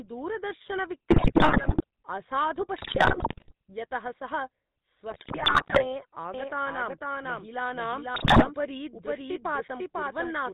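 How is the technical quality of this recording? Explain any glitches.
The recording is heavily degraded, with codec damage throughout, four bursts of corrupted decoding, and a duplicated copy of the sound over the last stretch.

GSM full-rate codec, throughout. The speech sounds like it has been squeezed through a vocal-tract model driven by a sparse pulse train, which fits the 13 kbps GSM full-rate codec. Everything above 4 kHz is missing, so the sound is dull and narrowband. The coarse excitation adds a clearly audible buzzy, gravelly roughness to every voiced stretch.

GSM bit errors, at 1.10–1.84 s, 2.78–3.52 s, 5.10–5.85 s and 8.14–8.47 s. Corrupted bits reach the decoder's filter, pitch and gain parameters, so individual frames get a warped spectrum or a sudden jump in level. The error rate is about 6% in the first two bursts and nearly 5% in the third. The last burst is the shortest but the worst, at over 10%. 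Each burst breaks the speech into squawks, pops and gargling.

Doubled audio track, from 6.34 s to the end. A second full-band copy of the speech enters abruptly and runs around half a second behind the original at roughly the same loudness. It has no decay or room colouring, so it is not a reverberant echo. It is most likely a second capture path or an edit leaving two unsynchronised copies mixed together. The result is overlapping, stuttering speech through to the end.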